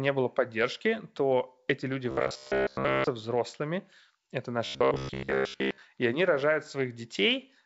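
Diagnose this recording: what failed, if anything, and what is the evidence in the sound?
A rigid, metallic buzz near 67 Hz covers 2.11–3.07 s after "эти люди" and 4.66–5.81 s after "взрослыми это". This is likely robotic sound from repeated short buffers at the driver or buffer stage, where a 15 ms chunk loops while most of the real audio is skipped.

Rough pops with brief level jumps at 2.43–2.49 s and at 5.37 s point to bit errors on an ADPCM link. The flipped bits throw off the G.722 decoder's step size and predictor, so each error rings on briefly.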